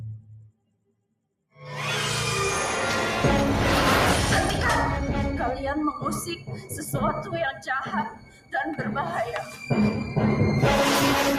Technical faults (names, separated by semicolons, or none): noise suppressor applied to music or sounds; sound cut by the noise suppressor